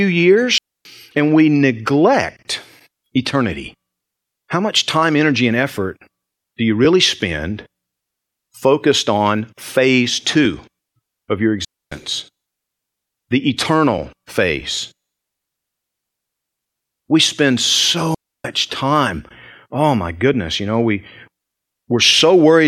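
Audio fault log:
0.58 to 0.85 s, 11.65 to 11.92 s and 18.14 to 18.45 s: digital wireless dropout. The speech drops into clean near-silence for about 0.27 s, 0.27 s and 0.30 s, with no noise burst around any of them. The first ends just before "and we neglect eternity", and the second follows "of your". The wireless receiver lost too much data and muted with a very quick fade instead of passing corrupted audio.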